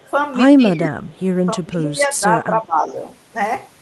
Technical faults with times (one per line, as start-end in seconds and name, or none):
0.00-0.04 speech suppressed in double talk
0.02-0.11 echo leak
0.74-1.01 speech suppressed in double talk
1.06-1.24 echo leak
1.60-2.91 speech suppressed in double talk